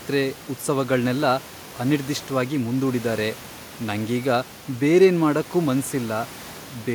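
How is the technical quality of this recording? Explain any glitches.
No glitches turn up anywhere in this speech recording; the only thing under it is the room's own background noise, sitting about 22 dB below the speech.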